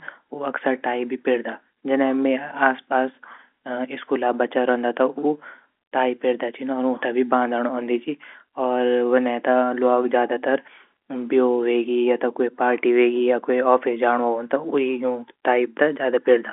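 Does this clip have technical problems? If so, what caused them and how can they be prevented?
No, this speech clip has no technical problems.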